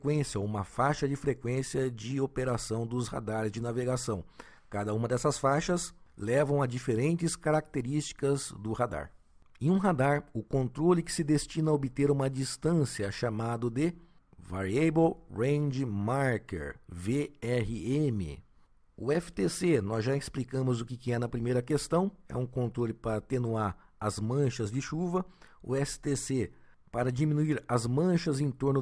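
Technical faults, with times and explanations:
No technical faults can be heard anywhere in this audio. Nothing in it calls for a time or an explanation.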